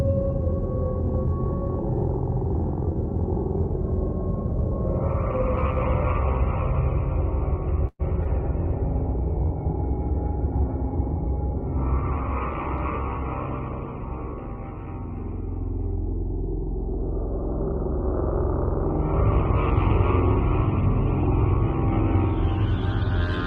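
At 7.87 s the sound stops moving forward and trails off into a fading buzz that thins to about 40 ms of silence before resuming at 8.01 s. This is a call audio freeze. Packets were likely held up in transit, so the jitter buffer ran dry and the receiver kept extending the last sound for about 119 ms. When the packets arrived, playback picked up where it had stopped. Nothing was lost, but the audio now runs roughly 119 ms later than before.

Right after that come two brief smears, at 8.13 to 8.16 s and 8.24 to 8.27 s. These are short concealed packet loss. About 21 ms and 20 ms of audio never reached the decoder in time. The receiver papered over each hole by continuing the preceding sound and then blending back into the real signal. The first event also takes back some of the extra delay from the freeze.

From 8.35 s to 14.27 s the sound turns duller and rougher, with a watery, coarse texture. 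This is a call bitrate drop. The Opus stream, which carries 32 kbps with content up to 12 kHz before and after, fell to 17 kbps after the bandwidth estimate dropped. The encoder quantised more coarsely and narrowed its band to 8 kHz, which removes the top-end air. It stayed at that lowest rate for about 4.1 s.

Overlapping the end of that stretch, from 13.69 s to 15.20 s, the audio sounds slightly hurried while keeping the same pitch. This is a jitter buffer speed-up. The buffer was holding more audio than its target, so the receiver trimmed short pitch-period slices in quick succession. Together these cuts remove about a tenth of a second, and playback runs at roughly 106% speed until the excess delay is gone.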